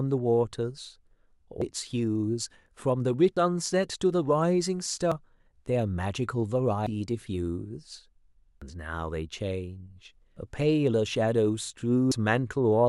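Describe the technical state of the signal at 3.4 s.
At 3.37 s the recording likely dropped audio between chunks, losing a piece while closing one 2-second chunk and opening the next. Roughly 300 ms of speech is missing, and the sound on either side is butted together with no gap, heard as an abrupt skip.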